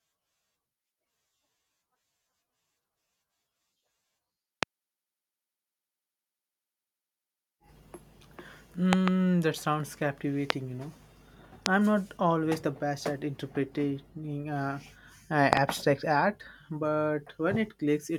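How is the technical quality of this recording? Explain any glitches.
The recording is marred by loud pops over the speech at 4.63, 8.93 to 9.10 (a double pop), 10.50 after "that sounds", 11.66 before "I'm not always the", and 15.53 to 15.59 s (double, after "at interpreting uh uh"). Each sits roughly 25 dB above the speech, likely from voltage pulses such as a switch or static. They appear as tall vertical waveform spikes and full-band spectrogram stripes, while the speech continues underneath.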